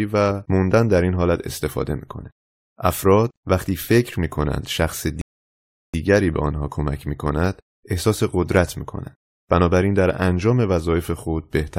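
At 5.21 s the speech drops abruptly into silence and stays silent until 5.94 s, then picks up exactly where it broke off, with nothing missing from the flow. That gap is a rebuffering stall: playback consumed all the audio it had downloaded and had to wait for more data to arrive before continuing. The pause adds about 0.72 s to the running time without removing any of the original sound.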